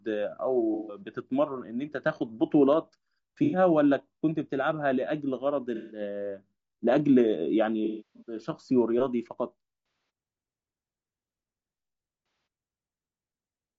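Throughout, the speech is rough and grainy, with noise filling the gaps between harmonics and a thin, synthetic-sounding top band. That steady texture points to low-delay AAC compression, likely AAC-ELD at a low bitrate near 32 kbps, whose short frames resolve pitch harmonics poorly. Against this runs AAC frame loss with concealment at 0.74–1.01 s, 3.44–3.58 s, 5.75–6.01 s, 7.85–8.38 s, 9.86–10.10 s and 12.26–12.47 s. Unlike clean dropouts, these gaps are papered over with smeared, phasey noise rebuilt from the last good spectrum. The longest, at 7.85 s, is scattered, with one run of roughly 300 ms.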